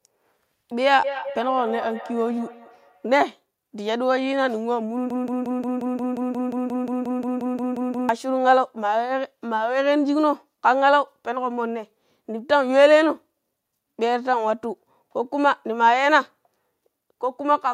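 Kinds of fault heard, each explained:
Feedback echo between two devices: From 1.04 to 3.16 s the speech returns as a delayed copy at a fixed interval of roughly a fifth of a second, peaking about 11 dB below the direct speech. This is the pattern of two devices in the same room on one call: one plays back what the other captured, that microphone picks it up again, and neither echo canceller removes audio played by the other device.
Broken-record loop: From 5.10 to 8.09 s a single 177 ms fragment repeats back to back, identically, 17 times, so the speech stops advancing and becomes a fast, mechanical stutter. The likely cause is a player, encoder or stream that stalled and kept outputting the last fragment it held. Whatever should have been heard during those three seconds is missing.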